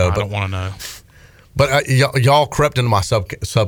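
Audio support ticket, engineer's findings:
No faults found on listening; speech clip passes with no dropouts, clicks, level jumps or other playback defects to report.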